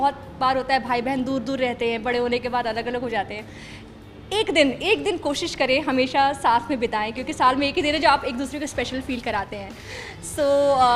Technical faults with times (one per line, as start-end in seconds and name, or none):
8.77-10.96 periodic clock jitter